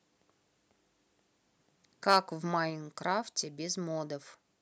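From 2.09 to 2.17 s the loudest stretch of speech turns harsh, with a gritty, crackling edge on the peaks where the waveform has been flattened at the top. This is microphone overload, most likely from an input gain set too high: the signal ran about 4 dB past what the converter could represent, so a small share of samples, around 2 percent, were cut off at the converter's limit and replaced by that distortion.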